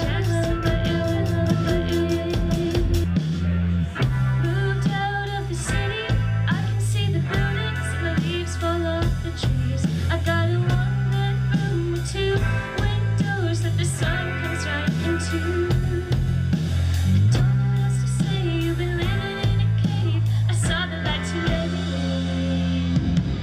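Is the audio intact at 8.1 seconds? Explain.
Yes, at 8.1 seconds the audio is intact, with no dropout, click, distortion or other fault at that moment.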